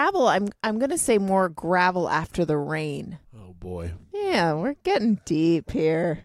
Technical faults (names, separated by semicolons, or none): none